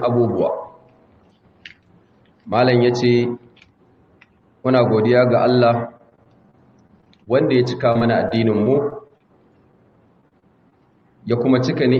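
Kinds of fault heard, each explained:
Repeated packet loss (robotic sound): holes of up to 30 ms, each patched by extending the previous sound, recur in three choppy bursts rather than one isolated dropout.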